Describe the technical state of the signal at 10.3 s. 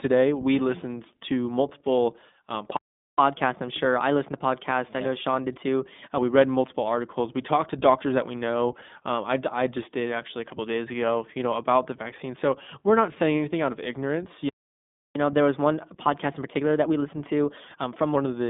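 At 10.3 s the speech carries iLBC codec damage, present across the whole clip. Each 20 ms frame is coded independently, which fits the 15.2 kbps mode, leaving a 200 Hz to 3.6 kHz band with nothing above 3.8 kHz and a plainly audible rough, synthetic texture.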